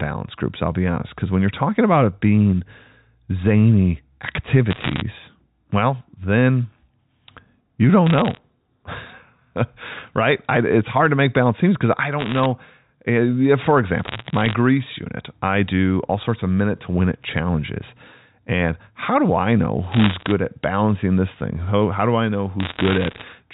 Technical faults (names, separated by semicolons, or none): bit errors on a digital phone line